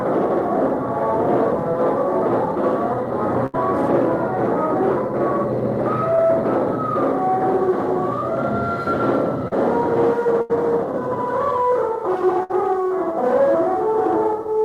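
The audio has two kinds of network dropout. A burst of packet loss at 3.46–3.55 s, 10.41–10.51 s and 12.43–12.51 s holds and fades the last sound for 60–80 ms, then skips ahead, so material is missing. Shorter concealed packet loss at 6.15 s and 9.48–9.53 s is patched in 23–37 ms and blends straight back, leaving a brief smear.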